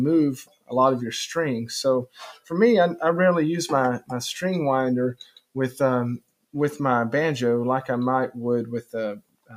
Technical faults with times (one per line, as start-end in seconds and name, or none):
0.00-9.56 noise suppressor applied to music or sounds
0.43-0.72 sound cut by the noise suppressor
2.06-2.51 sound cut by the noise suppressor
5.18-5.56 sound cut by the noise suppressor
6.19-6.54 sound cut by the noise suppressor
9.16-9.56 sound cut by the noise suppressor